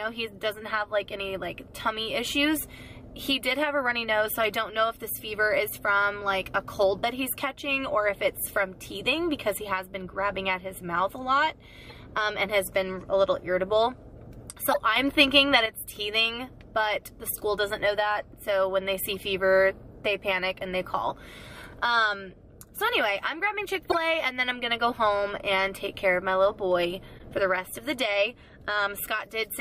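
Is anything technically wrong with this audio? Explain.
Yes. There are two kinds of fault: repeated corrupt frame decoded errors and one sudden gain jump.

Corrupt frame decoded: short bursts occur at 5.16–5.24 s, 11.88–11.96 s, 14.72–14.76 s, 17.03–17.05 s, 19.09–19.20 s and 23.90–23.98 s. Each spans a few codec frames. In each damaged frame, flipped bits in the compressed data were decoded anyway, so misread gains and codes put energy at the wrong frequencies. The result is a brief chirp or noise blip. The events at 14.72, 19.09 and 23.90 s stand out most. The one at 17.03 s is faint.

Sudden gain jump: from 14.96 s to 15.66 s, the whole signal, background noise included, steps up by about 7 dB. It drops back at the end of that span. The change is abrupt, with no fade in or out. The likely cause is a digital gain setting applied instantly, sample to sample, rather than ramped, which produces a step-change in level.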